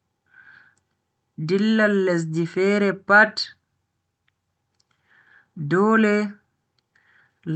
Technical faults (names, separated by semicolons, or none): none